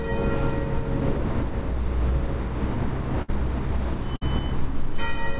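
At 3.22 s and again at 4.16 s, a burst of packet loss hits. About 60 ms goes missing each time. The receiver stretches the last sound, fading it, before the audio resumes, all within a band ending at 4 kHz.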